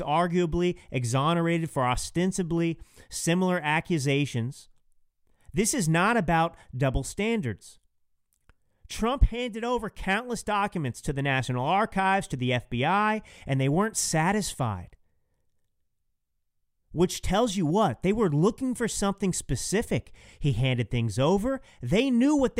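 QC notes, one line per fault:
Nothing to flag on this speech recording; no technical faults turn up anywhere in it.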